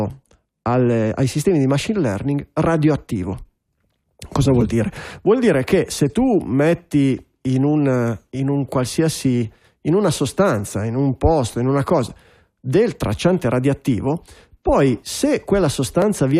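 A speech recording with periodic USB or driver dropouts near the end. From 14.02 to 16.02 s, short ticks sound at a steady spacing of 1.0 s, about three in all. Each one is a tiny skip of around a millisecond. The audio jumps ahead rather than falling silent, so the waveform breaks and clicks. The even timing points to a background task that briefly stalls the USB bus or audio driver on a fixed schedule.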